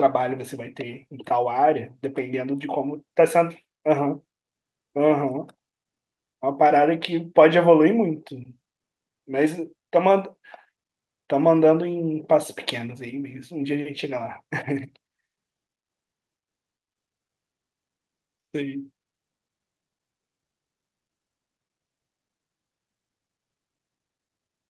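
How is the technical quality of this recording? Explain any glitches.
The recording shows no glitches or faults, and the speech comes through a call codec path whose high end stops around 12 kHz.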